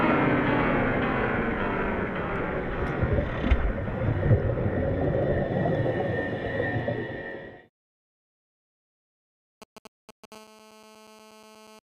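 Near the end of the audio, from 9.62 s to 10.26 s, a galloping dit-dit-dit pattern of short raspy buzzes appears, well up in level at roughly 15 dB below the programme. These are GSM signalling bursts: a nearby 2G handset is exchanging brief control transmissions with the network, and the audio circuitry is rectifying the RF pulses into the signal path. The buzz fragments repeat at 216.7 Hz, which matches the GSM frame rate. Starting at 10.32 s and running to 11.79 s, the pattern settles into a continuous GSM phone buzz. This is a hard, harmonic-rich 216.7 Hz tone at about 24 dB below the signal, and it bears no relation to the audio content. The steadiness shows that a handset is now in an active call and is transmitting every frame, so the rectified pulse train no longer has gaps.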